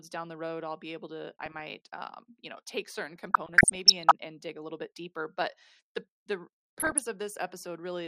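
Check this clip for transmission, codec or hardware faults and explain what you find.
Two faults are present: MP2 compression throughout the speech, and DAB burbling in three bursts.

MP2 compression runs the whole length. The sound is dull, with a gurgling, granular edge. This is likely MPEG Layer II starved of bits. Upper sub-bands drop out and the rest are coarsely quantised, which fits a rate near 80 kbps.

DAB burbling occurs at 1.46 to 1.61 s, after "i'll be able to"; at 3.16 to 4.11 s, after "you know take certain"; and at 6.80 to 7.06 s, after "deeper but the the". Uncorrected bit errors corrupt samples and scale factors. Single sub-bands get short blips of noise and sub-bands jump in level.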